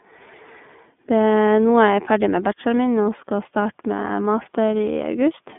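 The iLBC codec is audible from start to finish. The speech is band-limited, roughly 150 Hz to 3.5 kHz, with nothing above 3.7 kHz. Each 30 ms frame is coded on its own. The voice sounds rough and synthetic, which fits the 13.33 kbps mode.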